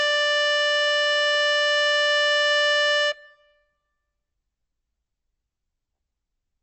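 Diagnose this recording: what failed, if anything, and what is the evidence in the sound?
The codec stage is where this music went wrong, and the damage is plainly audible from start to finish: nothing comes through above 8.1 kHz. That hard treble ceiling is the signature of starved MP3 compression, likely a low bitrate around 40 kbps, with the encoder discarding top-end lines to save bits.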